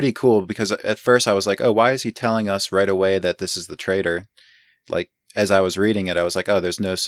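No technical faults are audible.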